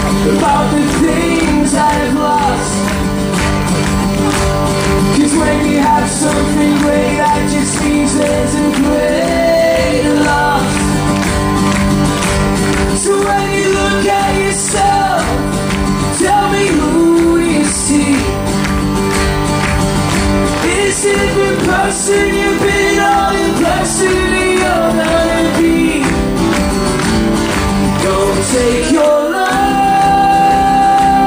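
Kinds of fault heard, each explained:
USB whine, throughout: a steady, fixed-pitch whine at 1 kHz runs under the sound for the whole clip, sitting roughly 25 dB below the programme level. It comes from the USB bus pulling current in regular 1 ms frames; that pulsing leaks into the audio path through shared power or ground, so the 1 ms frame rate appears as a 1 kHz tone, which is also the strongest component here.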